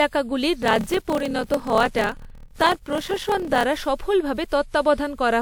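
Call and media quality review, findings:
Call and media quality review, findings:

Generation loss throughout: swirly, hollow, smeared onsets. Likely repeated WMA passes near 128 kbit/s, about seven. Worse than one encode at that bitrate.

Block size mismatch (padded), 0.60–3.64 s: 38.3 Hz buzz, sound slowed to 0.889x with timbre kept. Fits 1024-sample blocks zero-padded. Unlike resampling, timbre holds.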